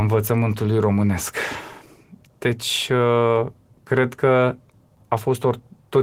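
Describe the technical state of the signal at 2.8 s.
At 2.8 s the speech signal is intact, with no fault audible at that moment.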